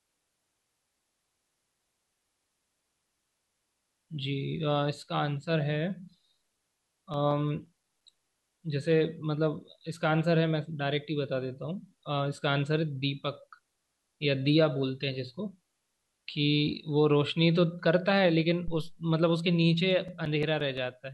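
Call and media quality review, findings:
CD scratch ticks, 7.14–8.35 s and 19.91–20.78 s: runs of short regular clicks in the speech, eight in the first burst and six in the second, roughly seven per second, each only a few milliseconds. Probable source is a scratched disc. Each rotation hits damage beyond error correction, and the player conceals the lost samples.

Phantom power thump, 18.68–19.06 s: deep low-frequency bump under the speech, decaying in about 86 ms. Probable source is the mic input. Phantom or supply voltage switched on a live channel, with the step passing through the coupling capacitors.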